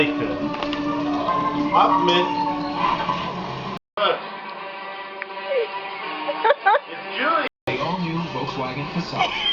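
At 3.77 s there's a brief gap of about 200 ms, then everything turns dull and boxy, with nothing above 5 kHz, a bit quieter and with a new noise floor underneath, until 7.67 s. That's likely the input switched to a poorer device mid-recording.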